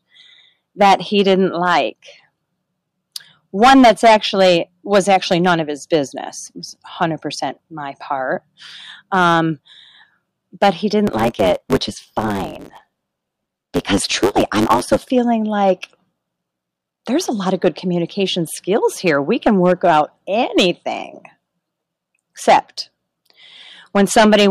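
Hard clipping runs through the whole speech clip: peaks are driven about 9 dB past the limit and sliced flat, so loud syllables crackle with harsh fuzz. From 11.06 to 14.98 s, after "but he" and up to "feeling like", a block size mismatch (truncated) chops off block ends, which fits 512-sample blocks being written. You get a 100 Hz buzz and speech running 1.16 times fast with its timbre intact.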